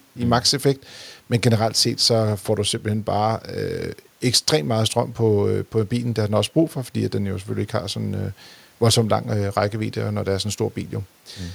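No technical faults can be heard in this speech recording. A faint room noise sits in the background at about 40 dB below the speech, part of the recording itself.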